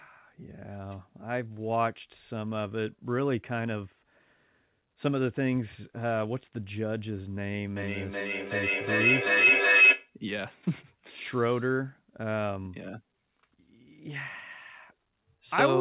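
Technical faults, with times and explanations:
7.76 to 10.16 s, feedback howl: the speech is swamped by a tone near 3 kHz that builds and peaks about 9 dB above the speech level. Two devices in the same room were on the call, so each trip around the microphone-to-loudspeaker loop added level, and the repeats narrowed to the frequency the loop favoured. The repeats come roughly 400 ms apart, the loop's delay. A spectrogram shows a bright horizontal band near 3 kHz, sitting below the 4 kHz ceiling set by what sounds like a G.711 narrowband codec. The waveform swells into a dense, rising envelope.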